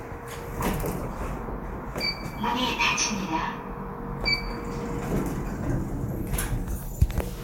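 Compressed frames skipped at 1.03 s: a few 10 ms frames never reached the output, so the sound jumps ahead by roughly 40 ms.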